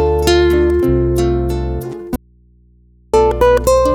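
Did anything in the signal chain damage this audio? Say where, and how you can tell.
Yes: an audio dropout to a faint residue runs from 2.16 to 3.14 s. The sound cuts abruptly for about 0.98 s, leaving only mains hum roughly 35 dB below the signal, which points to a likely break in the analogue wiring that left the input open while the path stayed live.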